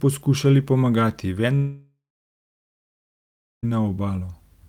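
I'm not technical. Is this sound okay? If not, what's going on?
No. A long network dropout hits from 1.55 to 3.65 s, just after "poskušali pomagati". About two seconds of speech, likely lost in transit, never arrive. The last sound stretches into a short fading buzz, then about 1.65 s of silence before speech resumes.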